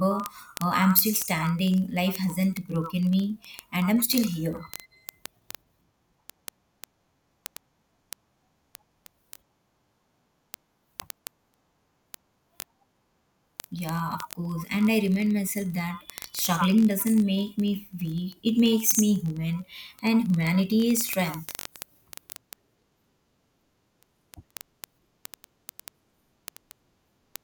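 From 0.12 s to the end of the speech, a steady stream of sharp ticks runs underneath, roughly every 20 ms, well over a thousand in all. These are word clock ticks: the receiving device runs on its own clock, off by roughly 0.1 percent, so the two clocks slip constantly and one sample is dropped or repeated at each slip. Their even spacing sets them apart from random crackle or isolated clicks.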